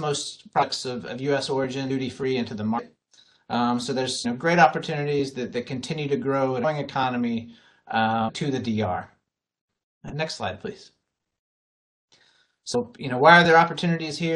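Compressed frames are skipped at 0.62 to 0.64 s, 1.89 s, 2.78 to 2.80 s, 4.24 s, 6.63 s, 8.28 to 8.30 s and 12.74 s. Each time, a run of 23.2 ms frames never reaches the output, so the audio lurches forward by roughly 150 ms, 400 ms, 200 ms, 200 ms, 200 ms, 700 ms and 200 ms. Unlike a dropout there is no silent gap.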